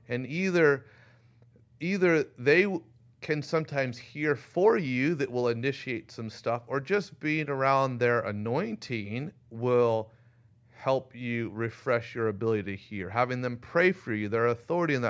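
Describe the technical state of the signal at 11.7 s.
At 11.7 s the speech signal is intact, with no audible fault at that moment.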